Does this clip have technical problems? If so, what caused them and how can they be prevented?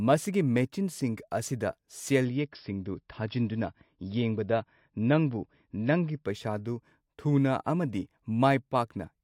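Yes. From 2.25 s to 6.25 s the speech suddenly loses everything above 5.6 kHz and turns swishy, then snaps back. This is an adaptive stream switching to a lower bitrate, which fits a drop to about 32 kbit/s. Unlike packet loss, there is no gap. A steadier connection, or a larger buffer, would prevent it.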